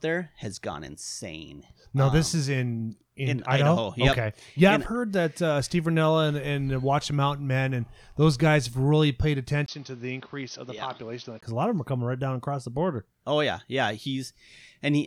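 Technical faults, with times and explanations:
9.66–11.43 s input switched to a poorer device: a 20 ms gap, then dull, softer speech cut above 6.3 kHz with its own background noise about 30 dB below the speech, likely a narrower-band microphone taking over.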